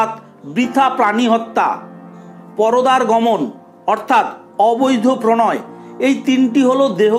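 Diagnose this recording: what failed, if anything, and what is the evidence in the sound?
Nothing failed in this recording, and no stage of the chain shows a problem that can be heard. The sound carries straight through without any event that points to a breakdown in the path.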